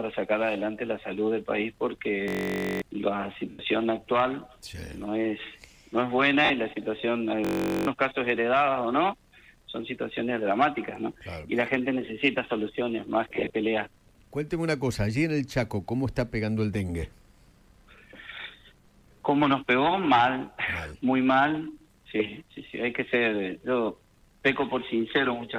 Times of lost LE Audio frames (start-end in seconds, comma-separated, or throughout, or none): 3.50-3.59, 6.45-6.51, 13.32-13.50